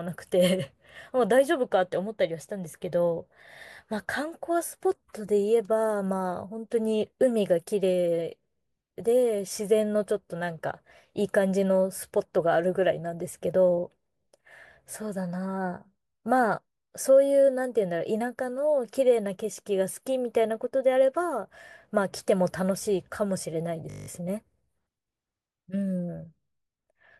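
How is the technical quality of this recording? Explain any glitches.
The recording has one clear glitch near the end. From 23.9 to 24.08 s there is a system hang loop. A stalled driver left the hardware replaying one 20 ms buffer nine times, producing a brief 50 Hz buzz. Essentially no audio is lost.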